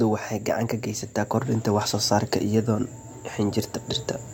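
Speech, with nothing technically wrong with it.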